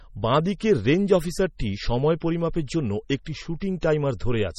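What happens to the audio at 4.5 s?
At 4.5 s the speech sounds watery and swirly, with a metallic, chirpy edge on s sounds and softened attacks, and there is nothing above about 15.8 kHz. This runs through the whole clip. The likely cause is heavy MP3 compression, which fits a very low bitrate of around 32 kbps. The encoder cuts off the treble at a fixed point and drops quieter frequency detail, letting it flicker on and off between frames.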